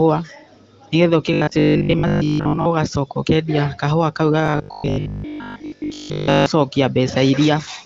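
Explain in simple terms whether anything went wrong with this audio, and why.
New audio likely arrived too seldom, so 20 ms scraps were replayed instead. That is robotic sound from repeated short buffers: a stiff 50 Hz buzz at 1.33–2.67 s and 4.46–6.46 s.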